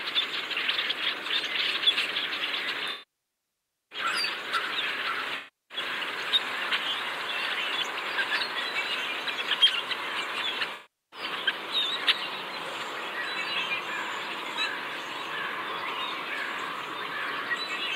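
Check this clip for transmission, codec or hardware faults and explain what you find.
Three dropouts from AAC frame loss with concealment, at 2.91–3.99 s (about 1.0 s), 5.36–5.78 s and 10.73–11.20 s. With frames missing, the decoder repeats the last good spectrum with randomised phase. The short gaps sound smeared and noisy. The one-second gap fades toward silence, then returns. A spectrogram shows blurred, stretched bands, and the waveform shows a decaying envelope.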